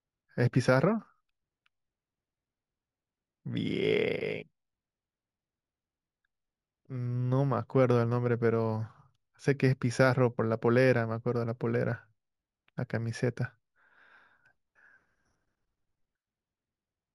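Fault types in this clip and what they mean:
Imaging from linear upsampling: the speech was raised to a higher rate by straight-line interpolation, which fits a 16 kHz source. The top of its band is dulled, and a faint mirror image about 35 dB down, between 8 and 16 kHz, gives sibilants a metallic shimmer.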